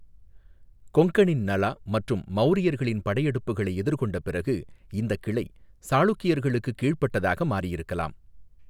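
No technical faults are audible.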